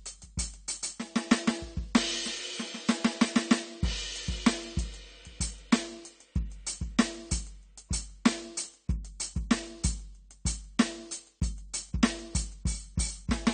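A music clip with AAC compression damage throughout. Nothing sounds above 9.1 kHz, so the top end is dull. Sustained tones warble and fizz, and the texture smears. This is likely low-bitrate AAC-LC coding, which fits roughly 32 kbps.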